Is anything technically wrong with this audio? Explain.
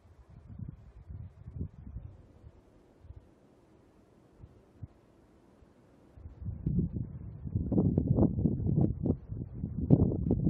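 No, nothing is technically wrong with this audio.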